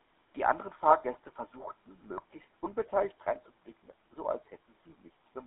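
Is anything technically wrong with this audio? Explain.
Yes. The whole speech clip runs through the GSM full-rate codec, and the damage is plainly audible. The codec models the vocal tract and drives it with a sparse, regularly spaced pulse excitation, which gives voices that buzzy, gravelly edge. The line band is about 200 Hz to 3.7 kHz, so it sounds thin and telephone-like. The room noise sits about 43 dB below the speech.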